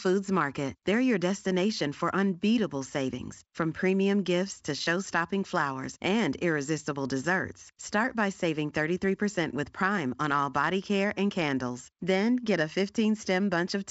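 No technical faults are audible.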